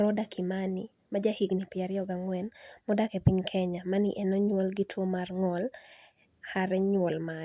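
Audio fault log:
The speech signal shows no audible technical defect at any point in the recording.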